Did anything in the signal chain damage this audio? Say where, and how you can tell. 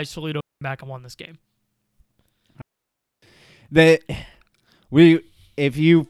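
Yes, digital wireless dropouts at the radio link: clean near-silent holes at 0.40–0.62 s (before "back and won this") and 2.62–3.22 s. The receiver mutes on lost data, leaving blank spectrogram columns with no noise bursts.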